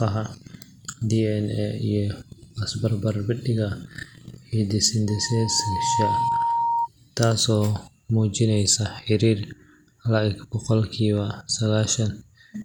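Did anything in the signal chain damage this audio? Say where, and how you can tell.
Yes: a loudspeaker feedback squeal at the capture end, where the microphone is picking up its own loudspeaker. From 5.07 s a steady 930 Hz tone rises out of the speech over roughly a second and reaches about the same level as the speech. It holds there until it stops at 6.88 s. At 930 Hz the loop gain exceeds one, so the tone keeps feeding itself. A spectrogram shows one thin horizontal line at 930 Hz, and the waveform swells into a dense, even-amplitude band.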